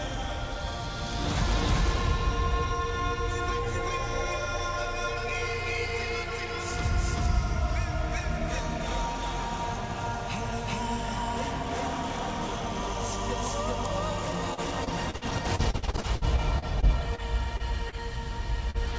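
From 14.54 s to 17.21 s the sound turns choppy as pieces keep dropping out. This is repeated packet loss. Nearly twenty separate holes open up across that stretch, the longest about 58 ms. Together they total about half a second, roughly a fifth of the span. Each hole is bridged by extending the sound just before it, and the next one arrives before the audio has settled.

Three brief smears follow at 17.57 s, 17.89 s and 18.71 s. Each is a short smear or wobble where a sliver of the sound seems to blur. These are short concealed packet losses, each about 30 ms of audio that never arrived in time. The receiver papered over each gap by continuing the preceding sound, then crossfaded back into the real signal. The call path itself carries nothing above 8 kHz, which fits a G.722 wideband codec.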